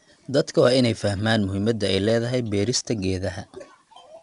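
From start to finish the speech carries 4-bit ADPCM compression, and the damage is plainly audible. Each sample is coded as a coarse 4-bit step from a predicted value, so the error rides on the signal as a gritty hiss that swells with every loud syllable and roughens sharp onsets. Nothing is present above about 10.6 kHz, which fits a sample rate near 22 kHz and a bitrate around 88 kbps.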